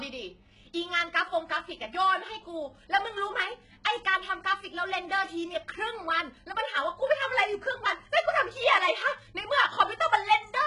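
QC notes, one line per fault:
Throughout, HE-AAC compression: the treble is present but synthetic, with s sounds turning gritty and lispy and a metallic sheen over the upper range, and nothing at all above 11.1 kHz. This is likely spectral band replication, where copied lower bands stand in for the real highs, so harmonics fail to line up across the crossover. The heavy damage fits a very low bitrate near 12 kbps. On a spectrogram, upper bands look like smeared, repeated patches ending at a hard ceiling.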